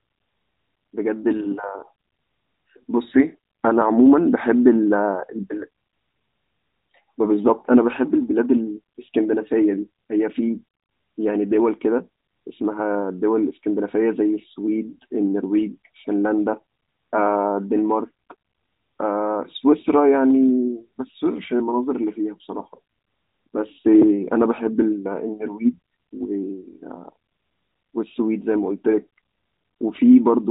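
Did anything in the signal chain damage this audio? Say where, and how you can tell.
No, nothing in the chain has damaged this speech; it has simply been through a narrowband AMR mobile codec at 12.2 kbps, which is doing its ordinary job here.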